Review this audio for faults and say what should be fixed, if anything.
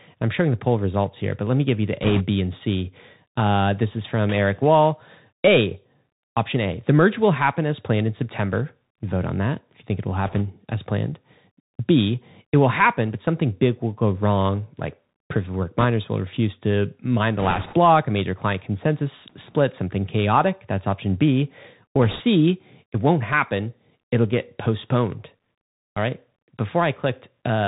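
The whole recording carries Bluetooth CVSD headset codec damage, plainly audible. Nothing above 4 kHz survives, s sounds come out scratchy, loud bright passages distort where the adaptive one-bit step cannot keep up, and a granular hiss sits underneath, consistent with 64 kbps CVSD. Prevention: capture through a wideband path such as mSBC or a wired microphone instead of the headset voice profile.

Bit errors on a Bluetooth voice link produce short bursts of rushing, crackly noise at 2.02–2.23 s, 10.26–10.42 s, 15.78–15.85 s, 17.39–17.77 s and 22.02–22.21 s. The 17.39 s burst is the longest. Because each flipped CVSD bit nudges the waveform only slightly and decays, there are no sharp clicks. The noise is heavier at 2.02 s, 15.78 s and 17.39 s, where around 3 percent of bits point to corruption, than at 10.26 s and 22.02 s, nearer 1.5 percent. Prevention: keep the headset close to the host and away from 2.4 GHz interference so the radio link stays clean.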